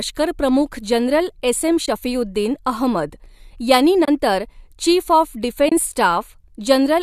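At 1.86–1.88 s, 4.05–4.08 s and 5.69–5.72 s there's AAC frame loss with muting: the decoder zeroed the lost frames, leaving soft-faded gaps of about 20 and 30 ms, which fits two or three short frames of the light-sounding low-delay AAC likely in use.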